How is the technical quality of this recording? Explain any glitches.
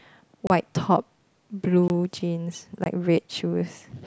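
The recording has three short dropouts, each a block of digital silence. They occur at 0.47 to 0.50 s (about 29 ms), 1.88 to 1.90 s (20 ms) and 2.84 to 2.86 s (20 ms). In each, a run of samples was zeroed, likely because the output buffer was not filled in time. The speech cuts abruptly to nothing and back, so each gap sounds like a tick or a tiny hole. A waveform shows flat near-silent stretches with sharp edges. A spectrogram shows thin vertical blank stripes.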